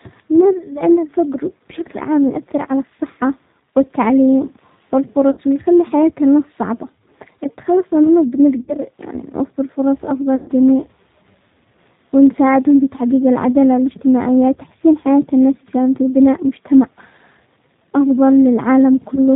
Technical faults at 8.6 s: G.729 codec; VoIP packet loss concealed by the speech codec

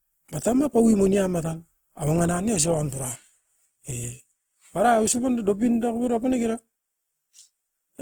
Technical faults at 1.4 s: Opus compression

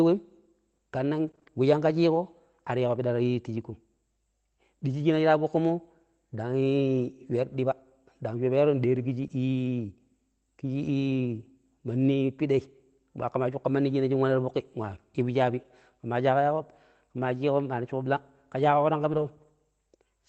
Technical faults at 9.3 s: lost packet rebuilt from error correction; short concealed packet loss

